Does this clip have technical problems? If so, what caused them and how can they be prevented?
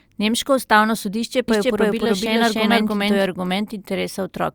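Yes. From 1.48 to 3.26 s there's a doubled audio track: the speech plays over itself roughly 300 ms late, at about equal level, dry and switching in and out abruptly. Likely a second capture path or misaligned edit. Mute the duplicate route and check edits for stacked copies.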